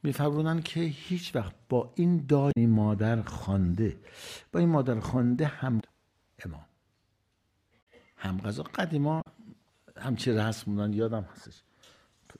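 Four short glitches break through the audio at 2.49 to 2.57 s, 5.80 to 5.83 s, 7.79 to 7.87 s and 9.18 to 9.27 s, each a brief disruption of 30 to 90 ms. These are damaged data in a compressed stream: corrupted bytes in the encoded file make the decoder misread those frames, lose its place in the bitstream and hunt for the next valid frame header, spitting out garbled fragments while it resynchronises.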